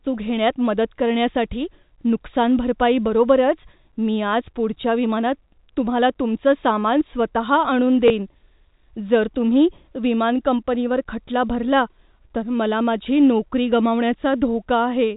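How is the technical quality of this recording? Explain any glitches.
One brief glitch stands out, a packet loss with the last packet repeated, from 8.08 to 8.10 s. The G.711 telephone coding keeps everything below 4 kHz, and a spectrogram shows the empty band above it.

At 8.08 to 8.10 s, 20 ms of audio goes missing, which points to a single lost packet. The receiver plays the previous packet again. Its edges seldom match the pitch cycle, and the single repeat sounds like a small blip, and the waveform shows a repeated 20 ms block.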